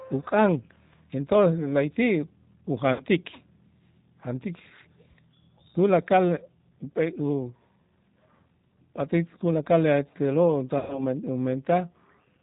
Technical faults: G.729 codec; VoIP packet loss concealed by the speech codec

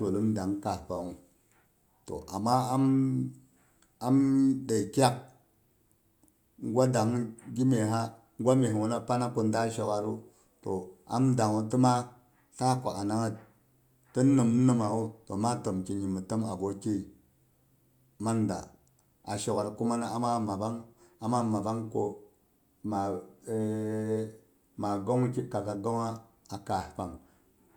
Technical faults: none

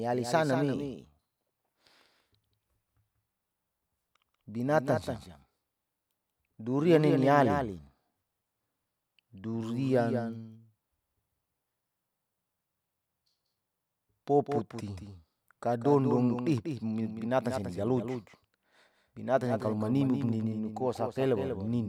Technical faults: doubled audio track

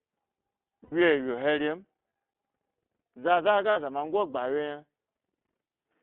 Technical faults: iLBC codec; lost iLBC frames

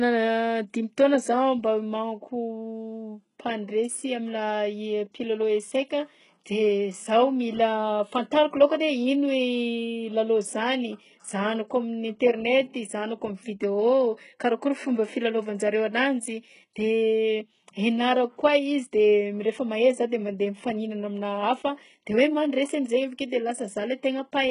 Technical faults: HE-AAC compression

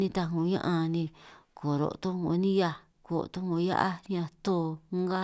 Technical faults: none

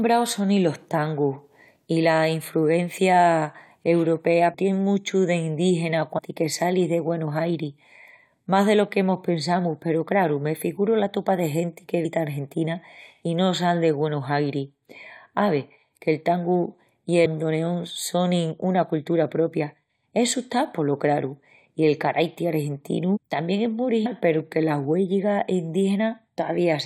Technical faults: compressed frames skipped

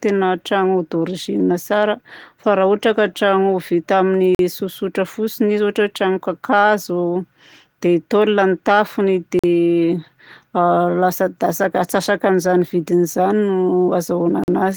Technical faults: gap between chunks

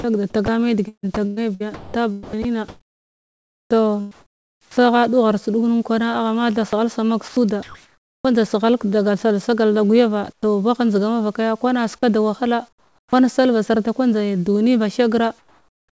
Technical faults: sound chopped by the voice detector; comfort noise in place of the background; onset clipped by the voice detector

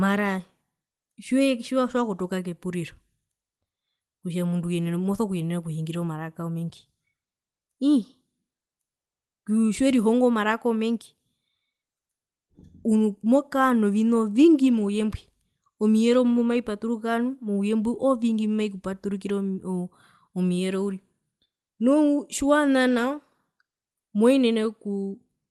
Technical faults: none

